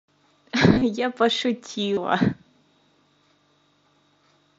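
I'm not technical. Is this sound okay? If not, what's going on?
No. Around 0.74 to 0.82 s and again at 1.94 to 1.97 s, the speech briefly turns into a short buzzy, repeating tone. This is concealed Bluetooth headset packet loss: bits of audio from the headset went missing, and the phone filled each gap by repeating the last moment of sound.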